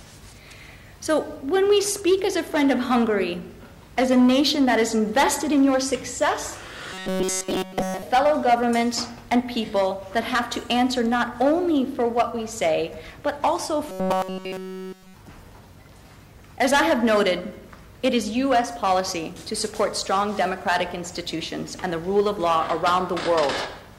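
At 6.94–8.02 s and 13.89–15.14 s, robotic sound from repeated short buffers: a 188 Hz buzz, likely a 5 ms buffer looping, with evenly spaced harmonic lines on a spectrogram.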